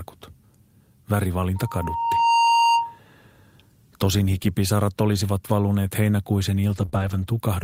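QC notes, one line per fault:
1.56–2.99 s, loudspeaker feedback squeal. A steady 928 Hz tone swells up over most of a second and sits roughly 5 dB above the speech. The microphone is hearing its own loudspeaker, and that one frequency keeps re-amplifying itself until the loop is broken.
6.69–6.83 s and 6.94–7.28 s, lost packet rebuilt from error correction. There is no dropout, but the speech turns rough and noisy. Packets went missing, and the decoder played the low-bitrate backup copies carried in the following packets. The second stretch points to a longer run of losses.
6.85 s and 6.89 s, short concealed packet loss. There are two brief smears, about 20 ms and 26 ms. No backup copy arrived for these gaps, so the receiver extended the preceding sound to cover the holes and then blended back into the real signal.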